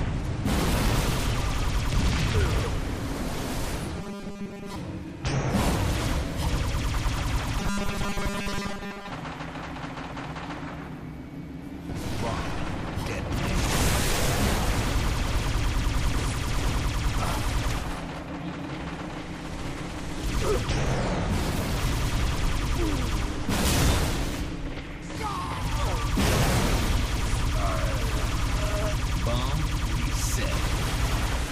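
Robotic sound from repeated short buffers at 3.97 to 4.76 s and 7.60 to 9.10 s: a rigid 200 Hz buzz replaces most of the audio, likely from a 5 ms buffer looping while fresh data is skipped.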